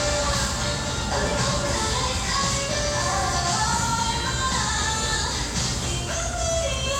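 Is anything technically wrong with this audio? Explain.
No, nothing technically wrong can be heard in this audio.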